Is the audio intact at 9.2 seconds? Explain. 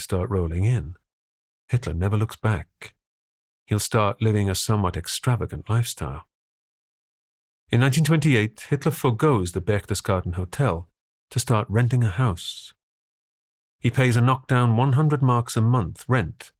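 Yes, the audio is intact at 9.2 seconds, with no fault at that moment.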